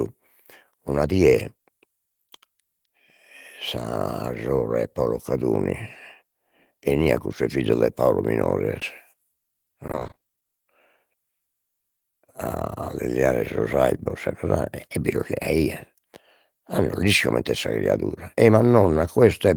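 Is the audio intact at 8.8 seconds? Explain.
No. From 8.79 to 8.83 s there is a short concealed packet loss: about 20 ms of audio failed to arrive in time, and the decoder filled the gap by extending the preceding sound before blending back, leaving a brief smear or wobble.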